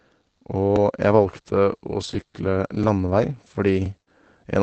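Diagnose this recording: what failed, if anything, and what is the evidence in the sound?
Brief rough, grainy patches appear at 2.13–2.32 s, 3.46–3.50 s and 3.54–3.58 s, with no gaps. This is lost packets rebuilt from error correction in the network stage. Each missing packet was replaced by the lower-bitrate redundant copy Opus carries in the following packet, so roughly 40 ms at a time sounds noisier.

A short smear with a wobble occurs at 4.02–4.09 s. This is short concealed packet loss. About 40 ms of the call arrived too late for the decoder, so the receiver extended the preceding sound to bridge the hole and then cross-faded back into the real signal.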